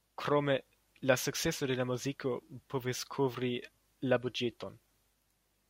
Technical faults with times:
none

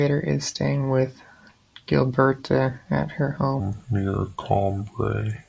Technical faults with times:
3.60-5.49 wrong sample rate

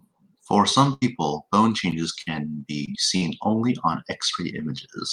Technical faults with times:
0.89-3.23 repeated packet loss (robotic sound)

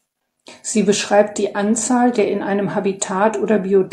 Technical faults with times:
none

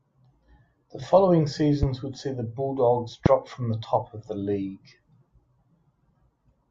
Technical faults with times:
1.83-1.86 loud pop
3.26-3.29 loud pop

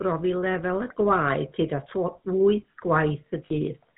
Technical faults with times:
0.00-3.97 GSM full-rate codec
3.47-3.52 lost GSM frames

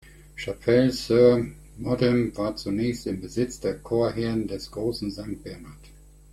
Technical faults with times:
none

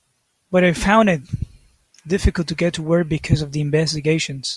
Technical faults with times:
none

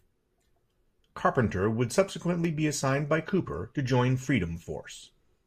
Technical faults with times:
none

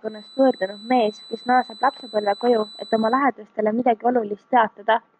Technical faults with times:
0.00-3.25 feedback whistle

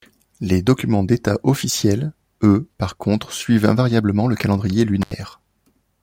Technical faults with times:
5.02-5.13 intermittent contact

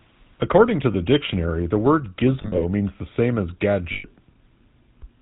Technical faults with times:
0.00-5.21 GSM full-rate codec
0.92-0.95 lost GSM frames
2.42-2.61 lost GSM frames
3.92-4.06 lost GSM frames

